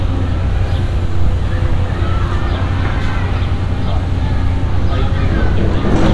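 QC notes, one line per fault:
No faults heard anywhere in this recording.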